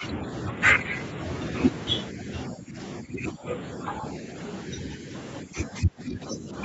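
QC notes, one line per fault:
0.0–0.21 s, 2.12–2.28 s, 2.5–2.78 s, 3.01–3.46 s, 4.68–5.13 s and 5.43–6.52 s, speech suppressed in double talk: with both sides talking at once, the echo canceller likely could not separate this talker from the loudspeaker echo. It turned the speech down with it, so the level dips by roughly 5 to 10 dB. The last dip, running for about a second, drops deepest at around 15 dB.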